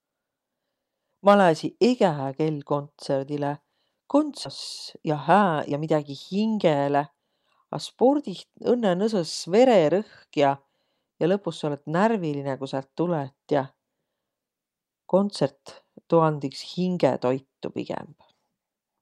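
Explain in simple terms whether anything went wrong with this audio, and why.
At 4.45 s there's a skip ahead: about a second of speech got dropped, and playback jumps straight to later audio with no gap. Then from 4.95 to 7.47 s comes a jitter buffer speed-up. The receiver had a backlog, so it snipped out tiny pieces, roughly half a second in total. The speech runs about 18% fast at the same pitch and sounds rushed.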